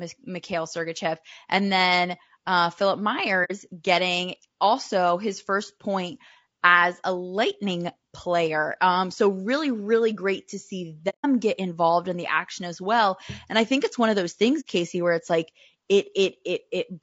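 The speech throughout sounds rough and grainy, with plainly audible damage: a hiss-like fill between the pitch harmonics and an upper band that sounds thin and artificial. This is likely low-delay AAC compression (AAC-ELD), whose short frames resolve harmonics poorly, and the roughness fits a low bitrate around 32 kbps. On a spectrogram the harmonic stripes look blurred, with speckled noise between them and a patchy, synthetic-looking top band. AAC frame loss with muting opens three soft holes. The first runs from 3.44 to 3.51 s (about 60 ms) just before "getting also his first". The second and longest runs from 11.09 to 11.26 s (about 150 ms) between "really great to see" and "get involved in the". The third runs from 14.60 to 14.65 s just after "it's one of those". In each, the decoder zeroed the lost frames' spectrum, and the overlapping windows fade the sound out and back in. The waveform shows tapered dips to silence, and the spectrogram shows blank vertical columns with soft edges.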